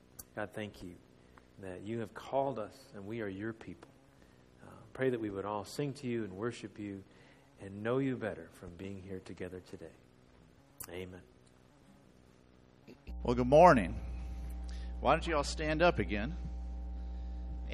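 At 13.08 s, mains hum enters and runs to the end of the clip at 17.74 s. It is a steady low tone at 60 Hz, with some low harmonics. Power-line energy has leaked into the signal path, most likely through a ground loop or a nearby transformer. The hum sits only a little below the wanted sound. It does not rise or fade, and it stays loud for the whole final stretch.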